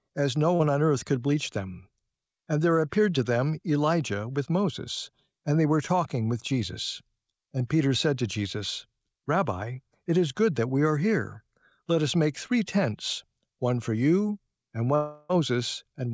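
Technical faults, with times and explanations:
0.56–0.61 s, short concealed packet loss: about 40 ms of audio arrived too late. The receiver continued the previous sound, leaving a brief smear or wobble.
14.95–15.31 s, long network dropout: the sound turns into a drawn-out, fading continuation for about a third of a second, likely a dropout that the receiver concealed.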